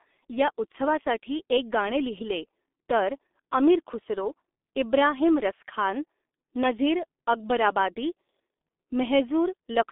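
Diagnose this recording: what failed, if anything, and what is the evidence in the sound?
Codec stage, throughout: heavy G.723.1 codec damage. The speech is muffled and hoarse with nothing above 3.8 kHz and smeared consonants, which fits a 6.3 kbit/s frame-based vocoder.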